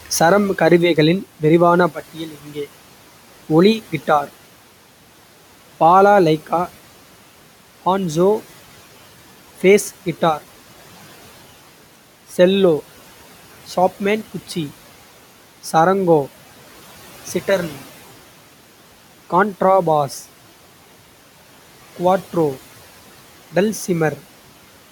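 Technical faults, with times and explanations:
2.14–2.57 s, speech cut by the noise suppressor: just after "சரம் கருவிகளின் விரிவான", the suppressor mistook part of the speech for background and pulled its gain down with the noise. About a fifth of a second of that span is affected, dropping by up to about 11 dB, so soft consonants and word endings come out swallowed and faint. The room noise sits about 23 dB below the speech, yet the suppressor still cut part of the speech.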